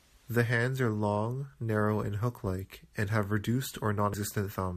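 At 4.14 s compressed frames are skipped: about one 85.3 ms frame drops out, so the speech jumps ahead.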